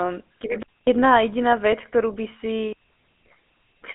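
Throughout the speech, GSM full-rate codec damage is plainly audible. The vocal tract is modelled and driven by a coarse pulse excitation, which leaves a buzzy, gravelly roughness consistent with a 13 kbps coder. The band sits at roughly 250 Hz to 3.4 kHz, with nothing above 3.8 kHz.

From 0.63 to 0.87 s, a digital wireless dropout cuts a hole of near silence lasting about 245 ms. The receiver lost too much data and muted behind a very short fade, so the gap is clean, with no noise burst on either side.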